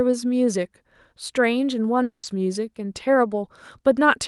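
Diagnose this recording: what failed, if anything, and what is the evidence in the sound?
Around 2.03 s the speech gives way to a buzzy continuation of the last sound that fades out, leaves roughly 120 ms of near silence, and the talker picks up again at 2.25 s with about 200 ms of material simply gone. That's a long network dropout, likely packets lost in transit on the call path. The receiver's concealment filled the gap by stretching what it last had, then gave up and muted until fresh packets arrived.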